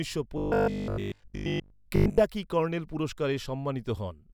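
From 0.38 to 2.18 s the speech takes on robotic sound from repeated short buffers: a rigid 50 Hz metallic buzz loosely tracking the words. This likely comes from about 20 ms of audio being replayed while new data lags, covering most of the stretch.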